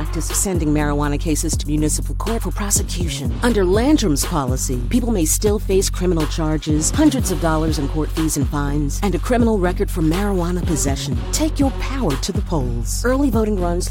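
No technical faults are audible.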